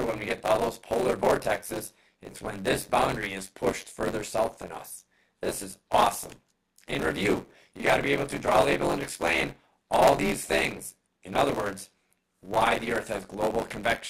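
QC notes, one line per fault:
Throughout, buffer tearing: a steady robotic rattle at 93.8 Hz, which fits a 512-sample buffer, because the writing and reading positions cross inside every period. In each period roughly two fifths of the audio is material from about 20 ms earlier, spliced in with hard joins at both ends. Unlike mains hum at a similar pitch, the buzz is present only while sound is playing and drops out entirely in silent passages.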